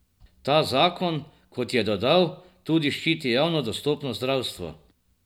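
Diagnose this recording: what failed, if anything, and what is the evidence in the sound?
Nothing in the speech signal points to a failure at any stage of the chain, from capture through to playback.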